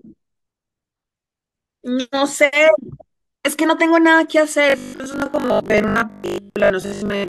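From 4.70 s to the end at 7.28 s, the speech goes robotic, the classic robotic sound from repeated short buffers. A fixed buzz at 50 Hz sits on top of everything, which fits the playback looping a 20 ms chunk over and over. Most of the real audio in that stretch, roughly 70 percent, gets skipped. The cause is likely audio arriving too seldom, so the gaps get filled with repeats and you hear a stiff metallic drone loosely following the words.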